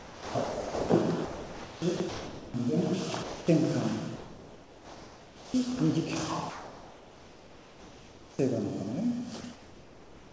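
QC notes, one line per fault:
0.00–0.89 s and 1.25–2.54 s, sound chopped by the voice detector: about 0.8 s and 1.05 s of sound are swapped for comfort noise in pieces as transmission likely switches on and off repeatedly. The waveform shows a ragged envelope of real bursts and flat noise patches. On the spectrogram, detailed texture alternates with smooth, uniform bands.
3.23–3.47 s, 4.16–5.54 s and 9.41 s, sound dropped by the voice detector: quiet sound was likely mistaken for background and not sent. About 0.24 s is lost in the first gap, 0.7 s within the 1.38 s second gap, and a 30 ms slice in the third. The waveform falls to a steady low noise floor. The spectrogram shows a featureless wash until the sound resumes.
6.50–8.39 s and 9.41 s–end, comfort noise in place of the background: with the sound paused, the receiver likely fills in synthetic noise instead of the real background, which sits about 20 dB below the loud parts. 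In the first span this fill is about 3 dB quieter. The waveform shows an even, unmodulated floor. The spectrogram shows a smooth, static band, cut off at 8 kHz like the rest of the G.722 call audio.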